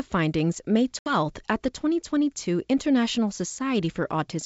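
Speech carried over G.722 wideband coding at 64 kbit/s shows packet loss on an ADPCM call: a hard-edged silent hole of about 70 ms near 0.99 s, fitting roughly seven lost packets. Unlike a simple dropout, the audio resumes unevenly until about 1.16 s while the decoder's adaptive predictor and step size resynchronise with the sender's.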